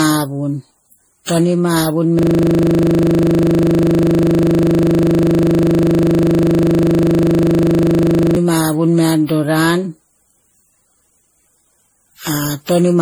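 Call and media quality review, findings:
Swirly, hollow, smeared speech with blurred attacks throughout; likely generation loss from around ten MP3 re-encodes, fitting a 64 kbit/s chain. Worse than one pass would leave.

System hang loop, 2.19 to 8.36 s: a 40 ms slice repeats exactly, giving a steady 25 Hz buzz. Frozen host, ring buffer cycling. Identical repeats, unlike a jitter-buffer stutter.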